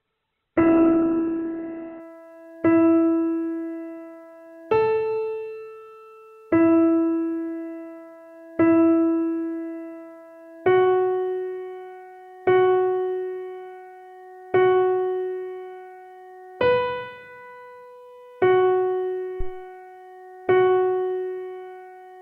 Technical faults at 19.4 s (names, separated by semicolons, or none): phantom power thump